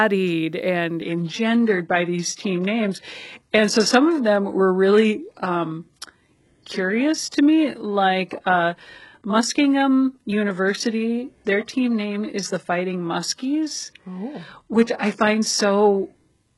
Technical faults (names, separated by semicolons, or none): adaptive stream at a lower bitrate